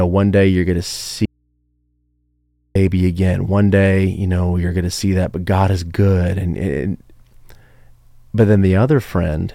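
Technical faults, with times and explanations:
1.26–2.75 s, audio dropout to a faint residue: speech cuts abruptly for 1.5 s, leaving mains hum far below normal level, likely a broken feed into a still-live input.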